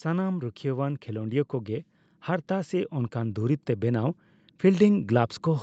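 The speech and its background swell upward together across the whole clip, from 0.05 s to 5.62 s, a steady rise in level rather than a jump. This is automatic gain rising: the call's gain control judged the input too quiet and kept lifting its gain. The sound carries nothing above 8 kHz, consistent with the call path's bandwidth limit.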